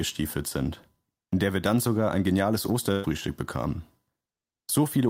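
Speech, with a burst of packet loss at 2.91 to 3.06 s: 120 ms is missing, concealed by the last sound held and fading, visible as smeared, decaying bands ending in an abrupt jump.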